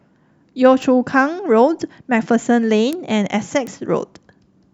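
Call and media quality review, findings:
Bit error spike, three single-sample ticks in the speech at 0.82 s, 2.93 s and 3.67 s. Peaks at about -23, -4 and -10 dBFS. Sharp, broadband, unrelated to the signal. This points to a single flipped bit in memory or on a digital link, where one sample jumps by a power of two and returns.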